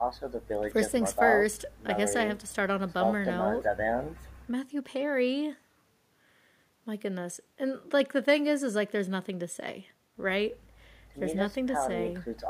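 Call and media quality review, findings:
No audible technical faults found in the speech signal; level, continuity and timing hold steady throughout the clip.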